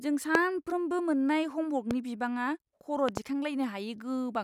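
Loud pops hit the speech at 0.35 to 0.37 s, 1.91 to 1.93 s, and as a double pop at 3.09 to 3.19 s, the first being the strongest at roughly 20 dB above the signal. A likely voltage glitch from a plug or switch causes these sharp spikes, which appear as thin full-height stripes on the spectrogram while the speech continues underneath.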